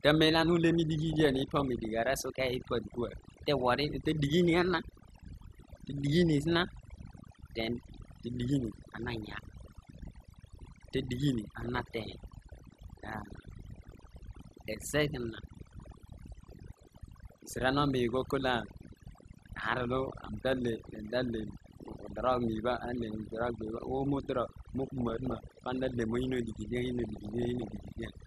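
Speech runs throughout with a background pushed to near silence, where small twinkling specks come and go. This is overdone noise removal: the reduction was set so hard that frequency bands near its noise estimate were cut away along with the quieter parts of the voice. Over the whole clip the sound is also dull and plainly gurgling and granular, with the upper range flickering in and out. That is likely MP2 compression, with the damage plainly audible, and it fits a low rate of around 80 kbps: too few bits to go round, so top sub-bands drop out and the remaining ones are coarsely quantised. Five bursts of burbling break over the speech at 1.12–1.85 s, 11.61–12.60 s, 13.76–14.19 s, 24.87–25.37 s and 26.99–27.88 s. This is DAB burbling: bit errors, at a rate of roughly half a percent to one percent, slipped past error correction into the audio data and threw individual sub-bands to wrong levels frame by frame, heaviest in the last burst.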